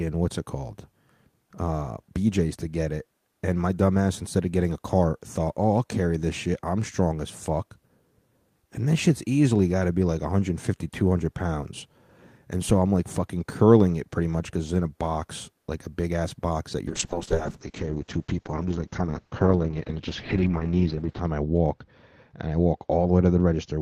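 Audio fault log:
12.69–12.77 s, phantom power thump: a supply got switched on a live input, and that step hits the coupling caps as a deep thump dying away in about 18 ms.
16.88 s to the end, call bitrate drop: the sound goes rough and muffled, losing everything above about 6 kHz, bottoming out for roughly 4.3 s, which points to the call dropping from around 32 to 7 kbps.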